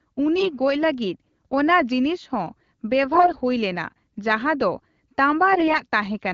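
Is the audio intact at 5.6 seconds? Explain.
No. AMR bit errors hit from 5.52 to 5.81 s. Flipped low-priority bits misplace excitation pulses and skew pitch, gain and spectrum. The voice turns hoarse, scratchy and gargly.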